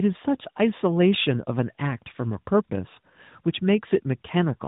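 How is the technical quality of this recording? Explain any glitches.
The quality is degraded throughout by tandem speech coding. From start to end, the speech sounds rough, muffled and warbly. The audio passed through more than one speech codec in a row, and it was decoded and coded again at each hand-off. Each coder worked on the previous one's damaged output, so the errors stacked. Nothing is heard above 3.8 kHz. The texture points to a waveform codec followed by AMR-NB at 12.2 kbit/s.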